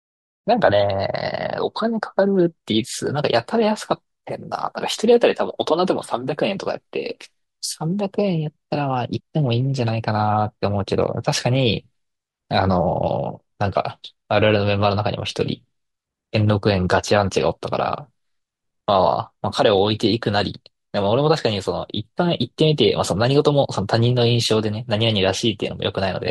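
At 4.67 s and 9.19 s, compressed frames skipped: whole 26.1 ms frames are lost, so the speech jumps ahead roughly 0.2 s, then 0.07 s. Each join is visible as an abrupt spectrogram seam.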